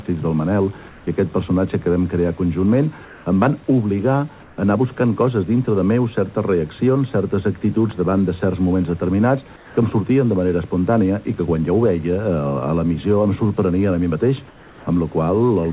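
At 0.89–1.07, 3.05–3.26, 4.43–4.58, 9.56–9.77 and 14.48–14.87 s, the quiet background becomes a steady, featureless hiss about 1 to 4 dB lower, likely comfort noise in place of the background from discontinuous transmission. Unlike a dropout, the pause is filled rather than silent. Above the narrowband call path, nothing reaches past 4 kHz.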